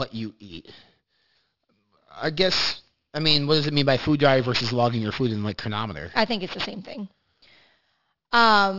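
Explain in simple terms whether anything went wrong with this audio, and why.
Something did go wrong. There's aliasing running through the whole clip. The audio was squeezed down to a lower sample rate, and it sounds like about 12 kHz, but nothing trimmed off the high end first. So anything above roughly 6 kHz couldn't fit and folded back down as wrong, unrelated pitches. You hear that as a gritty, metallic edge on the hissy s and sh sounds of the speech, from start to finish.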